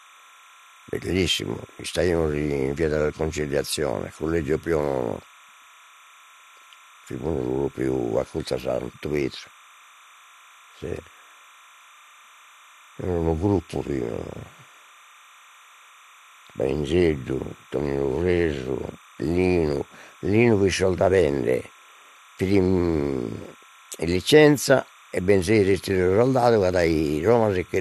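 Throughout the speech, timecode bleed sits roughly 30 dB below the signal: linear timecode leaking from an adjacent track or cable. Its square wave flips between tones around 1 and 2 kHz, producing a steady chirping warble whose rhythm fits 29.97 frames per second.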